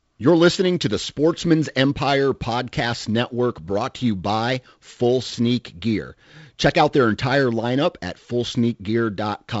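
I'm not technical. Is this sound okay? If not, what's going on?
Yes, this speech has no technical faults, and it sounds like a normal wideband phone call, with the usual limited top end of that kind of line and nothing above about 7.7 kHz.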